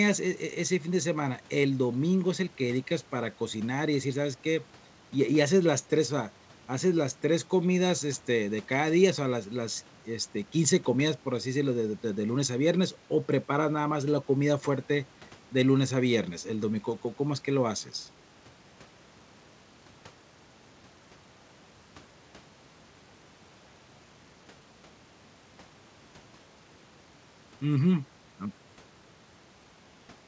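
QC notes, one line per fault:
Nothing to flag on this one, just speech coming over a call line, with the top end stopping at around 8 kHz in the way a wideband codec like G.722 would leave it.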